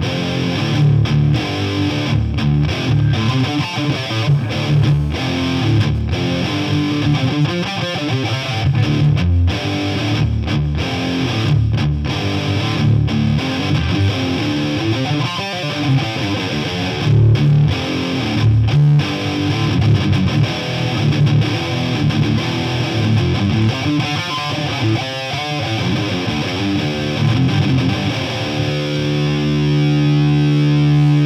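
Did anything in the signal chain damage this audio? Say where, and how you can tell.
Yes. Hard clipping runs through the whole clip at the converter or sample-format stage. The signal is driven about 6 dB past full scale, so a small share of samples, around 2 percent, have their peaks sliced flat. That adds high harmonics, heard as crackle on the loudest moments.

GSM phone buzz enters the analogue wiring from 3.44 to 5.28 s. It is a hard, raspy 217 Hz buzz with dense harmonics, about 25 dB below the signal and unrelated to it. A nearby 2G phone in a call bursts steadily, and the circuit rectifies those pulses.

GSM signalling bursts follow straight on, from 5.29 to 6.97 s, through the same analogue path. The continuous buzz gives way to even ticks with a longer 217 Hz buzz twice a second, at roughly the same level. The phone, still in a call, sends only sparse burst groups while its user is silent, and these are rectified too.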